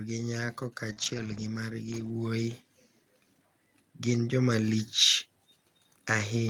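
At 0.89 to 0.91 s, 0.98 to 1.44 s and 1.88 to 2.10 s, lost packets were rebuilt from error correction: the decoder played low-bitrate redundant copies, so the speech continues without gaps but sounds rougher and noisier.

Between 0.93 and 0.98 s, a short concealed packet loss of about 20 ms was filled by extending the preceding sound and blending back, heard as a brief smear.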